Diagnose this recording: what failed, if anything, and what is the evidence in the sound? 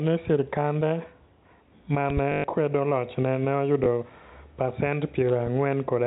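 Loud pop at 2.10 to 2.20 s and 5.29 to 5.50 s: paired pops peaking about 10 dB and 5 dB above the speech, likely voltage steps from a plug, switch or driver glitch.

Packet loss with last packet repeated at 2.32 to 2.44 s (120 ms) and 3.84 s: on the network, the receiver looped stale audio, giving a buzzy robotic stutter in the first run that fits 20 ms packets, and a small blip at 3.84 s.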